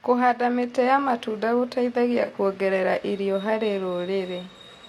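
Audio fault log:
2.23–2.30 s and 4.49–4.55 s, AAC frame loss with concealment: each time about 43 ms of coded audio, which fits a single lost frame, never arrived. The decoder filled the gap from the last good spectrum, so the speech between "mĩtĩ ya matunda gũteithagia" and "kuongerera irio harĩ", and again near the end, turns briefly smeared and phasey.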